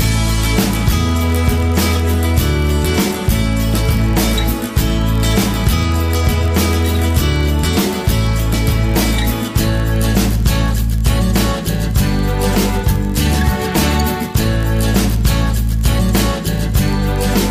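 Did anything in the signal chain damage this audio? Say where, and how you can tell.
Yes, at the driver or buffer stage, a block size mismatch (padded) runs throughout: a steady 43.1 Hz buzz, which fits a 1024-sample read buffer topped up with zeros. Unlike mains hum, it sits off 50 or 60 Hz. The slowdown, 0.999×, is negligible, and pitch holds.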